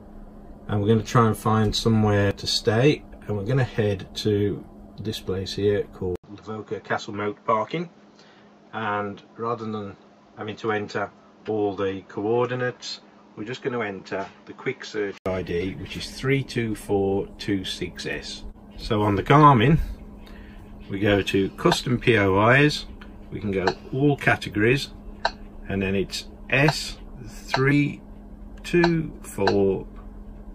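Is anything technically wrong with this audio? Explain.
Yes. An input switched to a poorer device from 6.16 to 15.26 s. At the switch there is a gap of about 80 ms, and the audio becomes dull, with nothing above 7.6 kHz. Its level drops by roughly 5 dB, and a new noise floor sits about 30 dB under the signal. This is likely the recording path moving to a narrower-band microphone or headset profile.

Compressed frames were skipped at 11.40–11.49 s, 19.97–20.01 s and 27.70–27.72 s. Each time whole frames are not played, so the audio jumps ahead by about 70 ms, 100 ms and 70 ms respectively.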